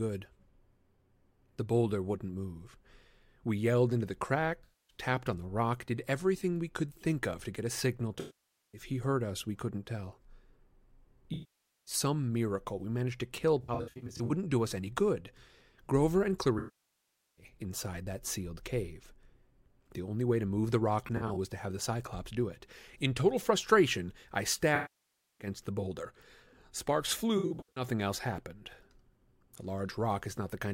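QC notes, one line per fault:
4.64–4.97 s, 8.20–8.81 s, 11.33–11.94 s, 13.62–14.32 s, 16.58–17.45 s, 21.06–21.37 s, 24.75–25.47 s, 27.38–27.84 s, AAC frame loss with concealment: the decoder lost runs of AAC frames, from about 107 ms up to about 789 ms per event. It rebuilt each missing stretch from the last good spectrum, so short losses turn into a smeared, noisy or phasey patch, while the longest decay to a very faint noise floor and fade back in. At 13.62, 21.06 and 27.38 s the losses are scattered short runs, so the speech breaks up in brief smeared, noisy or phasey patches.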